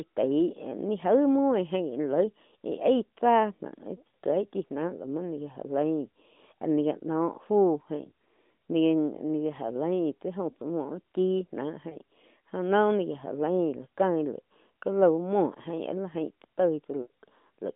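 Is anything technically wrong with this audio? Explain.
Yes. Lost AMR speech frames occur at 4.08 to 4.14 s, 11.90 to 11.97 s and 17.02 to 17.10 s. Failed frames were replaced by reusing the last good pitch and vocal tract settings at falling gain, so the sound smears and dips for about 60, 20 and 80 ms, with the longest gap fading toward silence.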